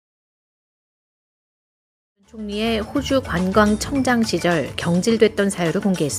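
No technical faults are audible.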